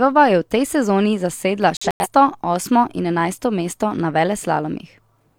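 From 1.77 to 2.07 s, a corrupt frame muted fault cuts the speech to abrupt silence for about 0.3 s, several frames long; timing stays intact afterwards.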